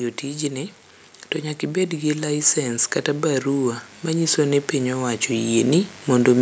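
From 1.64 s, just after "to nyaka", automatic gain rising lifts the level about 10 dB by 6.37 s, swelling the speech and background together.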